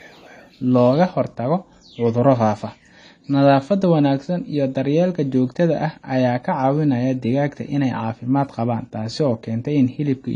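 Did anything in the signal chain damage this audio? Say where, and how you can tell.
Yes, it's a network problem. From about 0.95 s to the end, the speech abruptly loses everything above 10 kHz and picks up codec smear, with no gap. That's an adaptive stream at a lower bitrate: the connection slowed and the player switched down, which sounds like roughly 96 to 32 kbit/s AAC.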